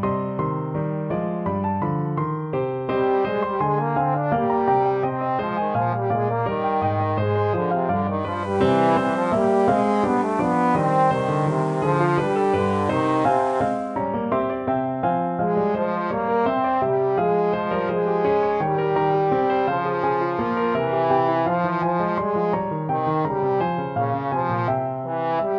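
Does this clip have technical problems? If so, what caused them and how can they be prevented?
Yes. At 8.17 s the sound cross-fades over about 0.47 s from digital to the FM version of the same station, and it blends back at 14.07 s. That's digital radio blending to analogue: the receiver lost the digital stream and fell back on FM. While on FM there's a level shift of about 2 dB and a layer of hiss sitting roughly 30 dB down. To prevent it, record from a stronger digital signal with a better antenna, or disable blending on the tuner.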